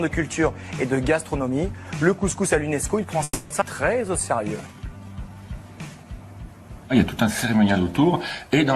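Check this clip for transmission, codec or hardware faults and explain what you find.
Three transmission faults occur close together in the middle of the clip.

From 3.23 to 3.52 s there is a call audio freeze. The last sound carries on as a fading buzz or hiss for 270 ms and ends in a silence of about 20 ms. The audio then resumes where it stopped, with nothing lost. The likely cause is packets held up in transit, so the jitter buffer ran empty and the receiver filled the gap.

At 3.60 to 3.63 s there is a skip ahead. Playback jumps forward across roughly a fifth of a second of audio with only a 10 ms fill, so the two sides are joined almost directly. The missing stretch was dropped while later audio was already queued, which pulled the delay back down.

From 4.02 to 5.35 s a jitter buffer slow-down adds 174 ms. The receiver repeated single pitch periods to rebuild its reserve, so the audio plays at about 87% speed at unchanged pitch, with sounds drawn out.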